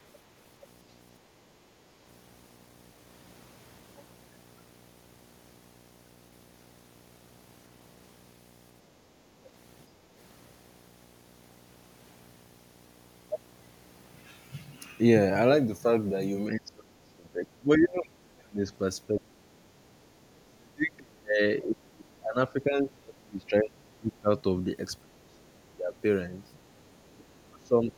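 Video or display buzz runs under the speech from start to finish, about 30 dB below the signal. A screen or video cable is coupling its 60 Hz field rate into the audio path, giving a steady low buzz with a gritty hash layered above it.

Background gated by the echo canceller occurs from 10.01 to 10.13 s. While the loudspeaker played, the canceller clamped the microphone. The room tone briefly sinks by about 6 dB for roughly a tenth of a second, then recovers as the gate releases.

Speech suppressed in double talk occurs from 16.49 to 18.64 s, 19.07 to 19.53 s, 19.99 to 22.37 s, 22.53 to 24.3 s, 25.01 to 25.94 s, and 27.11 s to the end. The speech repeatedly dips by roughly 30 to 40 dB and breaks into fragments. The likely cause is the echo canceller mistaking overlapping talk for loudspeaker echo and attenuating both.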